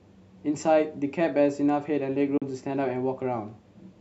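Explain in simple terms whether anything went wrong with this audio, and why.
At 2.37 seconds the speech cuts out completely for a split second, about 37 milliseconds, and returns by 2.42 seconds. This is a Bluetooth dropout, most likely caused by the wireless link missing a couple of audio packets, so the headphones briefly had nothing to play. The gap starts and ends suddenly or with a very quick fade, and the speech resumes slightly further along, as if it kept playing during the silence. A stutter would repeat a fragment, and a click would add a sharp sound instead of a gap.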